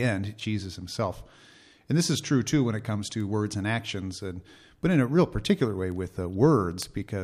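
Word clock ticks run from 0.49 s to 6.82 s: about seven sharp, single-sample clicks, roughly one a second, through the speech. The receiver runs on its own clock, some tens of parts per million off the sender's, and drops or repeats a sample each time they slip.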